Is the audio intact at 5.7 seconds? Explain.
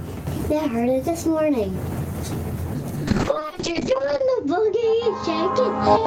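No. A call bitrate drop runs from 3.12 s to the end of the music, so 5.7 s falls inside it. The encoder's rate falls from 48 to 6 kbps, coding more coarsely and narrowing the band from 20 kHz to 8 kHz, leaving the sound muffled and rough.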